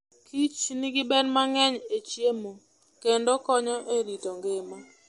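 Throughout the speech there is a watery, swirling quality, with s sounds turning metallic and nothing above 11.1 kHz. This is likely MP3 compression at a low bitrate near 48 kbps: the encoder cuts the treble and drops weak frequency lines that flicker between frames.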